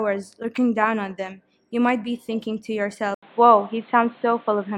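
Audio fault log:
3.15–4.77 s, input likely switched to a poorer device: after an 80 ms gap the sound turns dull, nothing above 4.2 kHz on the spectrogram, level shifts about 5 dB, and new background noise appears.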